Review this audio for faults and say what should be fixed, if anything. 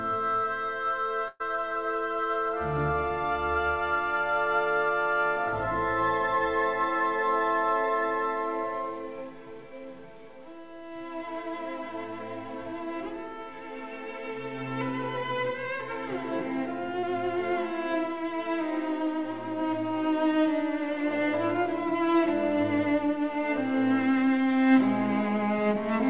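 The first fault is a burst of packet loss from 1.28 to 1.42 s. Around 120 ms of audio never arrived in time, so the receiver kept extending the last sound for about 116 ms and faded it down. That gives a held buzz or a dying hiss, then roughly 20 ms of silence before the audio picks up further along with that stretch gone. To prevent it, give the jitter buffer more headroom or add FEC or redundancy so a run of lost packets can be rebuilt.

The second is a short concealed packet loss from 17.00 to 17.05 s. About 40 ms went missing, and the decoder covered roughly 31 ms by continuing the previous sound, pitched or as shaped noise, before blending back into the real signal. You'd hear a brief smear or wobble there, and anything very short in that window could just disappear. It comes through the G.711 mu-law path, which has nothing above 4 kHz. To prevent it, tighten up the network path or turn on packet-level redundancy.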